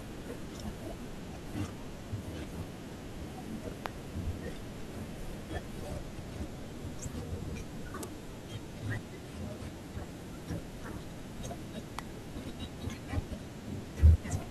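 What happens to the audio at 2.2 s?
Nothing goes wrong at 2.2 s; the speech there plays through without any dropout, click, distortion or other disturbance.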